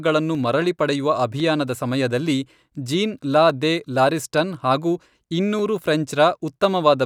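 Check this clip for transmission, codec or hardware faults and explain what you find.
One fault: clock drift buffer slips, about seven regular clicks every 1.05 s from 0.35 to 6.64 s. Likely cause: a clock mismatch of a few hundred ppm drops or repeats small sample blocks, which show as thin vertical lines on a spectrogram.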